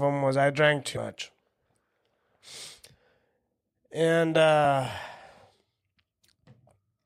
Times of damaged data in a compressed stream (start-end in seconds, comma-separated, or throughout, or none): 0.93-0.97, 4.61-4.65